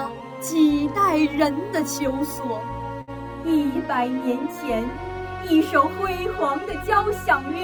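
At 3.01 s a burst of packet loss hits: several consecutive packets never arrived in time to be played, so the receiver had nothing to decode for roughly 60 ms. It covered the hole by stretching out the last sound it had and turning it down, which is heard as a brief smeared, fading tail running to 3.10 s. Playback then resumes further on, with about 60 ms of the original audio missing.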